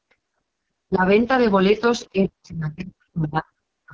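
Throughout, the AMR wideband (HD Voice) codec runs at only 6.6 kbit/s, one of its lowest rates, so the speech takes on a heavy rough, raspy grain. From 0.0 to 0.59 s, the background is gated by the echo canceller while the loudspeaker plays: for about half a second the room sound drops out, by up to about 40 dB, then returns. At 0.87 to 1.02 s, and again from 2.12 s to the end, the speech dips deeply, likely speech suppressed in double talk as the canceller pulls the talker down along with the echo.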